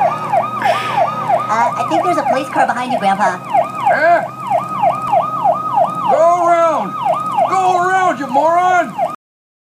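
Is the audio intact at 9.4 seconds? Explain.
No. At 9.4 seconds the clip is in a cut-off end. The audio stops abruptly at 9.15 s, mid-sound, and stays in digital silence until the end at 9.74 s. The final buffers were never written, so nothing decays.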